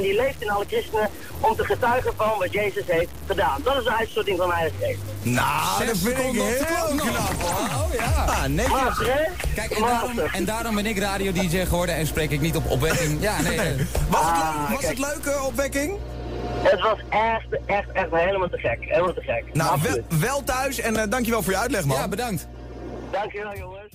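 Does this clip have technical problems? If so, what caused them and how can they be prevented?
Yes. From 0.0 to 15.56 s, low bit depth without dither gives a grainy distortion that tracks the sound and vanishes in silences. It is likely from truncation to about 5 bits. Prevent it by keeping full bit depth and dithering before any reduction.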